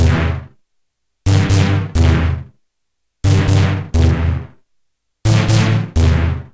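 An everyday sound recording carries aliasing from start to finish: the high end turns gritty and metallic, with tones that bear no harmonic relation to the source, folded down below 8 kHz, where the spectrum runs right up to the band edge. That fits a drop from 48 kHz to 16 kHz without an anti-aliasing filter. A clean low-pass conversion would sound dull instead; here the folded content sits roughly 25 dB under the main sound, audible as harsh false detail.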